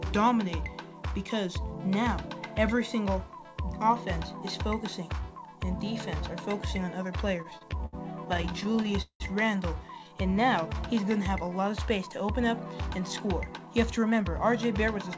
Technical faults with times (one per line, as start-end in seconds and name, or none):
7.42-9.22 repeated stalls (stutter)
9.98-10.44 jitter buffer slow-down
10.94-11.51 jitter buffer slow-down
13.50-15.15 jitter buffer speed-up